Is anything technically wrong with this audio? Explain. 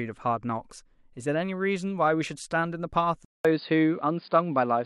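Yes. At 3.25 s the speech drops out for 0.2 s, then returns duller, a few decibels different in level, cut above 4.9 kHz with fresh background hiss, likely from an input switched to a poorer device.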